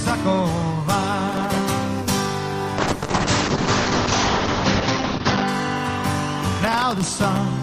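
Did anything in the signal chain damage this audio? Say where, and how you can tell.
Yes, at two stages. The first is the driver or buffer stage, where processor overload crackle appears from 1.29 to 1.62 s and again from 6.46 to 7.39 s. Each burst is a dense, gritty tearing built from tiny hard-edged slivers of just-played audio repeated in place of new samples. The spacing fits buffers of well under a millisecond, with dozens missed back to back. Network packet loss leaves fewer, longer gaps, often smoothed by concealment, so it would not sound like this.

The second is the codec stage inside call processing, where a call bitrate drop runs from 2.84 to 5.54 s. The top end shrinks from full band, around 20 kHz, to about 8 kHz, and the sound turns coarse. It stays at its worst for about 2.6 s before recovering. The audio points to the encoder falling from roughly 32 kbps to around 7 kbps after the bandwidth estimate dropped. 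A fixed low-pass filter would only dull the sound without adding that coding roughness, and it would not lift again on its own.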